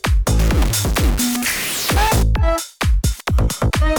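From 0.39 to 2.23 s the sound turns harsh and buzzy. This is a stuck bit, likely one data line held at a fixed value. About half the samples jump by a step near -15 dBFS, so quiet passages fill with noise.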